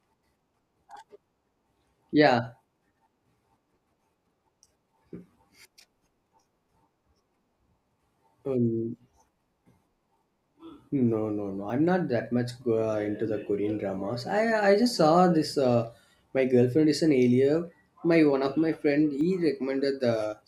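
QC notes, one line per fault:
11.7 s and 19.21 s, dropped buffer (overrun): the input buffer was likely overwritten before the software read it. Each time a small slice, about 20 ms before "not that much" and about 10 ms after "of my friend", is lost, and the joined edges give a small jump in the speech.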